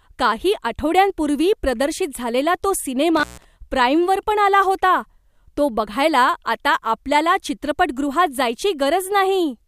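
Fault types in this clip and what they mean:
Intermittent contact: a loose cable or plug briefly breaks the signal path, so the speech drops out between about 3.17 and 3.45 s, with the line open for roughly 143 ms inside that span. Unlike a clean digital dropout or packet loss, which usually falls to dead silence or a smoothed gap, this break carries scratchy crackle at both edges as the contact makes and breaks, and faint analogue hiss fills the gap instead of silence.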